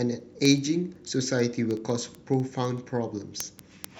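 From 0.14 s to 3.97 s, sharp ticks of uneven strength run through the speech about every 70 ms. These are word clock ticks. The receiver's clock drifts from the sender's by a few hundred ppm, dropping or repeating one sample at each slip.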